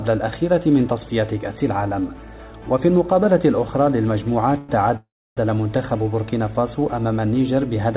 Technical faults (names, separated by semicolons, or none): call audio freeze